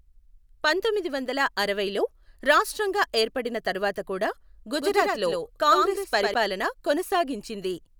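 From 4.82 to 6.34 s, just after "రాష్ట్రంగా ఏర్పడిన తరువాత కూడా", the speech carries a doubled audio track: a second full-band copy trails about a tenth of a second behind, somewhat quieter and dry, cutting in and out abruptly. Likely a second capture through a slower path.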